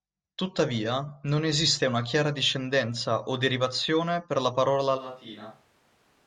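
A speech recording with a switch to a distant microphone at 4.99 s that lasts to the end. The sound turns abruptly roomy and hollow, with thinner bass, and drops by around 10 dB. Background noise becomes more evident, sitting roughly 25 dB below the speech. The likely cause is that the close microphone's signal dropped out or was omitted, leaving a pickup farther from the source, such as a camera microphone, which captures more of the room than the direct sound.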